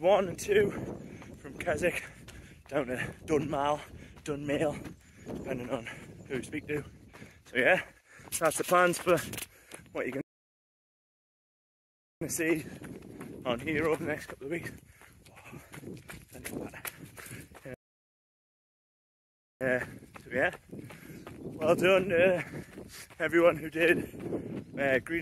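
At 10.21 s and again at 17.74 s the sound cuts out mid-flow in a playback stall, silent for 2.0 s, then 1.9 s, likely from a starved buffer, showing as flat blank gaps in waveform and spectrogram.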